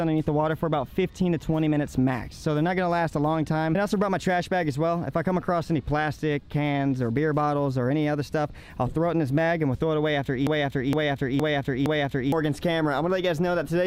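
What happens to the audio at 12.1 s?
At 12.1 s the audio is caught in a broken-record loop. It runs from 10.47 s to 12.32 s. A fragment of about 0.46 s plays, then plays again, exactly the same, back to back. It repeats four times, giving a stuttering, mechanical cycle. The likely cause is a player, encoder or stream that stalled and kept resending the last piece it held. Whatever should have sounded during that span is lost.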